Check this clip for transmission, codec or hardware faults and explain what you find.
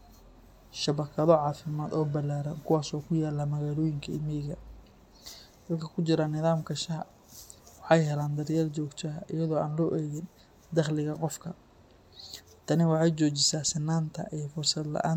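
Checking this clip for faults turns up none to explain.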